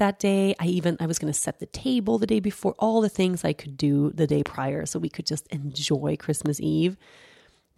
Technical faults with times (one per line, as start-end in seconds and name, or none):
4.46-4.48 loud pop
6.46-6.48 loud pop